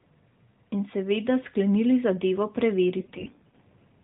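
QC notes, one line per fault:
3.00–3.64 s, AMR bit errors: the speech keeps its rough pitch and level but turns hoarse, scratchy and gargly. About one bit in ten of the weakly protected AMR data arrives flipped. Excitation pulses land wrongly, and the fine pitch, gain and spectrum values drift.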